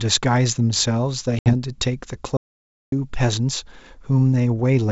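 Speech carried over G.722 wideband telephone coding, whose upper-band hiss stays faint, has two faults. Packet loss on the ADPCM call from 1.39 to 1.53 s leaves a hard-edged 70 ms hole, consistent with several lost packets. Afterwards the decoder's predictor and step size are out of step with the sender's, so the speech resumes with brief distortion. An audio dropout to silence from 2.37 to 2.92 s removes about 0.55 s of sound. The gap is silent with no room tone, likely caused by a lost input or link while recording continued.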